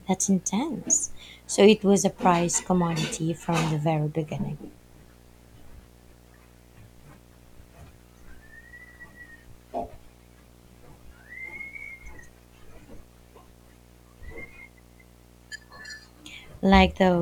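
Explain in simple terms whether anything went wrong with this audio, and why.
Yes, something went wrong. A quiet but steady video or display buzz runs under the speech from start to finish. A screen or its video cable leaked electrical interference into the audio, which produces a low buzz at 60 Hz, the rate at which the picture refreshes, with a gritty hiss on top. Ordinary mains hum is smooth and tone-like, while this buzz carries that rough, fizzy edge above it.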